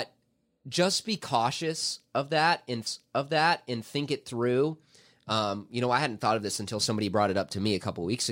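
At 2.86 s a stream segment repeats: the player queued the same chunk twice, so about one second of speech replays until 3.86 s, with a small blip at the jump back.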